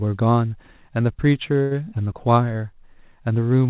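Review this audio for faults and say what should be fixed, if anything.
A short stall from a late packet occurs at 1.62–1.74 s: the jitter buffer ran dry, so the receiver held the last sound for about 87 ms, giving a drawn-out stretch with a slight buzz or dip. Playback then resumed from the same point, with nothing lost but everything after it running 87 ms later. A larger or adaptive jitter-buffer target, or a steadier network path, would keep packets arriving before their playout time. The call path's cut-off at 4 kHz is audible as narrowband sound.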